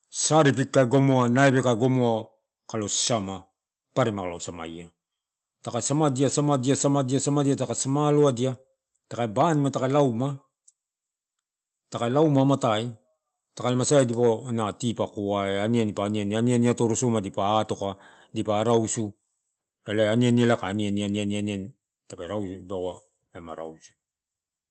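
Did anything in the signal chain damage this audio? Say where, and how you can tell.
No, nothing in the chain damaged this speech; the only audible trace of the call path is a top end that stops at about 8 kHz, which fits an Opus codec running in wideband mode at a moderate bitrate, with no dropouts, clicks, level jumps or timing disturbances anywhere in the signal.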